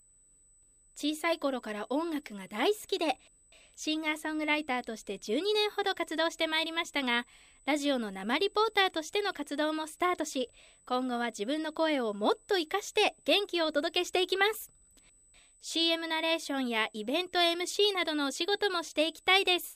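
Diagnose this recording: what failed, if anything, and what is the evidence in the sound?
USB whine, analogue wiring: steady 8 kHz tone throughout, strongest at 16 kHz, about 25 dB down; 125-microsecond microframe current leaking through power or ground.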